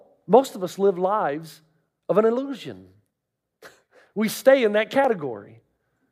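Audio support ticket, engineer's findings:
Speech skips ahead at 5.05 s. No silence, audio joined directly across the gap. Only a few milliseconds missing. Likely a dropped buffer (overrun): capture side failed to read samples before hardware overwrote them, discarding about 7 ms.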